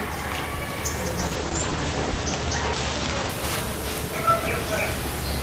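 From 1.2 s to 3.35 s the audio suffers a call bitrate drop. The top end narrows to 8 kHz and the sound turns coarse and watery for about a second, consistent with the encoder falling from around 32 to 10 kbps. Unlike packet loss, nothing drops out.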